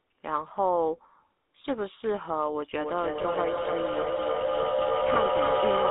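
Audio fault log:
throughout GSM full-rate codec: the speech has a buzzy, gravelly roughness because the vocal tract is rebuilt from a coarse pulse excitation, which fits GSM full rate at 13 kbps. The band runs only from 250 Hz to 3.6 kHz, so the roughness is distinguishable from simple narrowband filtering.
3.22–3.26, 5.14–5.17 lost GSM frames: at each point the sound briefly freezes into a rough, metallic ring as the last good frame is repeated. Each gap fits a single lost 20 ms frame. It is too short to fade to silence.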